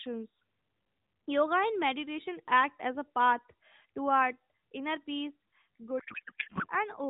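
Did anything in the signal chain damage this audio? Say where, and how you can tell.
Yes. At the codec stage, right after "toward inner peace", from 6.00 to 6.67 s, the speech gives way to garbled noise and warble that barely tracks it. That is a codec payload misread. The AMR narrowband frames are being unpacked with their bit fields in the wrong positions, which fits octet-aligned payloads being parsed as bandwidth-efficient. The decoder accepts the frames as valid, so instead of silence or dropouts it synthesises nonsense until the packing agrees again.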